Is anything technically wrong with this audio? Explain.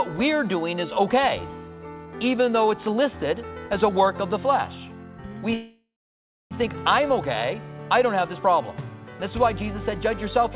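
Yes. There is a call audio freeze from 5.54 to 6.53 s. The sound stops moving forward and the last moment is stretched into a fading buzz or hiss. That dies to silence for about 0.6 s of the roughly one-second hold. The likely cause is packets held up in transit, leaving the jitter buffer empty. When they arrive, the audio resumes where it left off. Nothing is lost, but everything after runs about 0.97 s late. The narrow call band, with nothing above 4 kHz, is present throughout.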